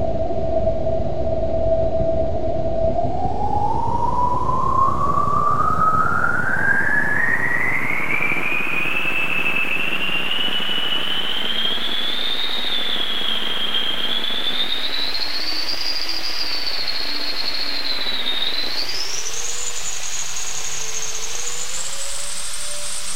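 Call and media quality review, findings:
Nothing to flag on this one: the sound comes through steady and intact, with no problems heard anywhere along the way.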